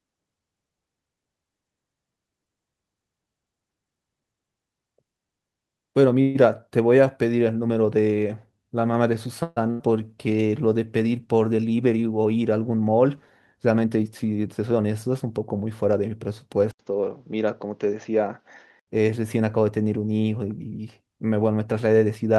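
Speech with several network and capture faults. At 6.21 to 6.37 s and 9.43 to 9.58 s a call audio freeze stretches the last sound into a fading buzz for about 130 and 140 ms. This is likely the jitter buffer running empty. The audio then resumes where it stopped, so nothing is lost. On a spectrogram these look like smeared horizontal bands, and the second has a 10 ms dropout. At 9.70 to 9.81 s a skip ahead drops roughly 150 ms of speech, leaving an abrupt splice where the waveform's envelope jumps with almost no gap. From 10.08 to 10.59 s a jitter buffer slow-down plays the audio at 88% speed by repeating pitch periods, adding 69 ms. The sound is drawn out at unchanged pitch, and the harmonic spacing stays steady while syllables lengthen. From 13.70 to 14.79 s a jitter buffer speed-up removes roughly 100 ms of pitch periods, running at 109% speed. The result sounds hurried, with syllables compressed in time but formants unshifted. 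From 16.71 to 18.88 s an input switched to a poorer device, likely a change of microphone or headset profile, dulls the sound. It opens with an 80 ms silence, and nothing above 6.8 kHz survives, so the spectrogram shows a flat ceiling there. A new noise floor sits roughly 50 dB down, while overall level stays about the same.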